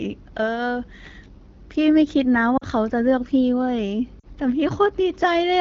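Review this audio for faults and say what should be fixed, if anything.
Lost AMR speech frames cause two brief dropouts, at 2.57 to 2.65 s and at 4.19 to 4.26 s. Each is a short fade toward near silence rather than a hard gap, fitting about 40 ms of missing audio, or two 20 ms frames. The decoder carried forward the last good pitch and vocal tract settings at reduced gain. Unlike a digital dropout to silence or a click from a splice, the sound fades instead of cutting off. It also reaches near silence within the two frames, as runs do in wideband. The surrounding HD Voice sound is clear, which fits AMR-WB at around 12.65 kbit/s. Improving the radio link, through better coverage or stronger error protection, would prevent these checksum failures.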